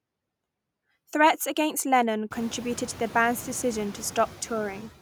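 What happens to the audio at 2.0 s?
Noise suppressor artifacts are present at 2.0 s, as they are across the whole clip. The suppressor pulls bands it judges to be steady noise down by about 17 dB frame by frame, so the background dips between words and swells beneath them.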